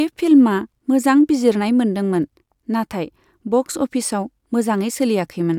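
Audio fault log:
No technical faults are present in this speech recording; the signal holds steady and continuous throughout.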